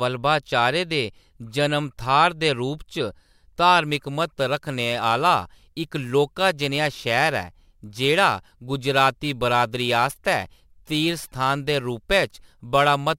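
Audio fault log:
3.86–13.19 s, crude rate conversion: the sample rate was changed by simple nearest-sample picking, dropping or repeating samples with no anti-aliasing filter. The spacing of those skips fits a step from 48 kHz down to 44.1 kHz. Because the skips recur in a fixed pattern, the error forms shifted, inharmonic copies of the speech, sitting about 25 dB below it. This is heard as a gritty, inharmonic fizz that rides on the louder and brighter parts of the speech.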